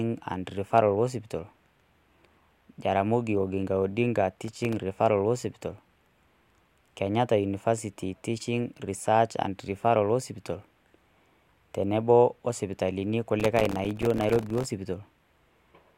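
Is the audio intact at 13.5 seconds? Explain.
No, 13.5 seconds falls inside a burst of processor overload crackle running from 13.40 to 14.65 s. The processor keeps missing its deadlines for very short audio buffers, each miss leaving a tiny silent gap. Unlike a single dropout, these gaps repeat densely, producing gritty crackle that stops once the load eases.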